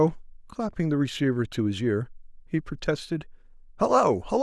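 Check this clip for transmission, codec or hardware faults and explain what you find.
No faults detected.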